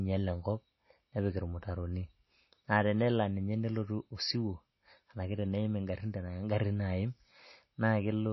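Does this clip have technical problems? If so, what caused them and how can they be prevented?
Yes. Throughout the speech, nothing is heard above about 5.8 kHz, and the remaining sound has a watery, swirling quality with smeared consonant attacks. This is likely MP3 compression at a low bitrate, around 24 kbps. Starved of bits, the encoder cuts the treble and switches weak frequency lines on and off between frames. That flickering artefact distinguishes it from a plain low-pass filter, which dulls the sound without any swirl. To prevent it, encode at a higher bitrate or keep an uncompressed or lossless copy.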